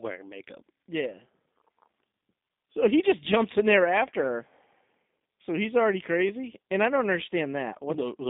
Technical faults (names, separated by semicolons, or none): G.729 codec